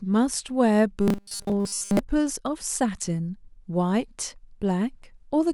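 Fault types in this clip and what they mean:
Robotic sound from repeated short buffers: from 1.01 to 1.99 s the speech becomes a rigid metallic 200 Hz buzz, likely from 5 ms slices being repeated throughout.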